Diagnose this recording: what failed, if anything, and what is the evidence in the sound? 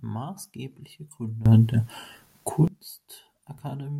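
At 1.46 s the speech and its background noise leap up together by about 18 dB, holding there until 2.68 s, when both drop back. This sudden gain jump likely comes from a digital gain setting or bit shift in the processing stage applied instantly, without a ramp.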